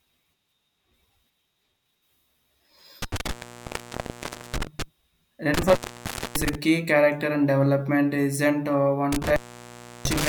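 A speech recording that drops out three times, each gap framed by a burst of crackle, with only faint hiss where the speech should be: from 3.02 to 4.82 s (silent for about 1.23 s), from 5.54 to 6.55 s (about 0.60 s), and from 9.12 to 10.28 s, just after "and development isn't a" (about 0.69 s). This is intermittent contact. A loose plug or cable conductor briefly loses connection, so the signal vanishes while the scraping contact crackles as it opens and closes.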